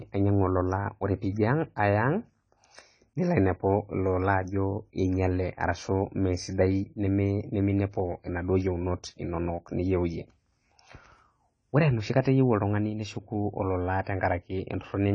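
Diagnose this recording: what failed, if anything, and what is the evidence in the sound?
The codec stage most likely failed: AAC compression at a starved bitrate quantised away the upper band entirely. Throughout the speech nothing sounds above 9.6 kHz, leaving it dull, with plainly audible smearing and fizz on sibilants, consistent with roughly 24 kbps AAC-LC.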